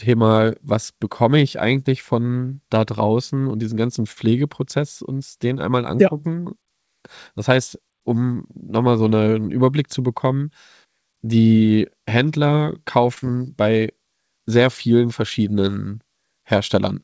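At 4.12 to 4.30 s, just after "draußen und diesen ganzen", a short stall from a late packet holds the last sound for about 44 ms. The speech then resumes from the same point, with nothing missing.

From 8.99 to 9.35 s, after "heißt um nochmal", a jitter buffer speed-up trims short pitch-period pieces. The speech runs at about 113% speed at unchanged pitch and sounds hurried. Roughly 50 ms is removed.

At 13.14 to 13.18 s, a second late-packet stall stretches the sound by 25 ms. Short concealed packet loss follows at 13.18 to 13.24 s. About 40 ms never arrived, and the receiver continued the preceding sound to fill the gap, which leaves a brief smear.

The audio throughout has nothing above 8 kHz, which fits a G.722 call codec at 64 kbps.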